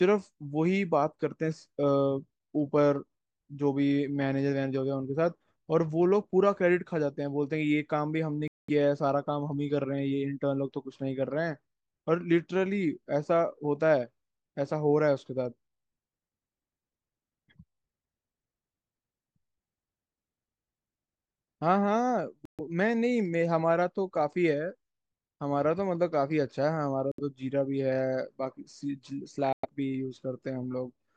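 Bluetooth stall at 8.48, 22.45, 27.12 and 29.53 s: the speech cuts to silence for 0.21, 0.13, 0.07 and 0.11 s, then resumes, likely because delayed wireless packets emptied the headphones' buffer.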